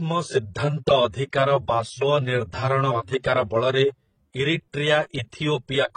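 The speech has likely passed through a chain of lossy codecs, a transcoding between lossy codecs where a later HE-AAC stage re-encoded an earlier AAC encode. Throughout, nothing sounds above 10 kHz, and artefacts from both low-bitrate stages blur together.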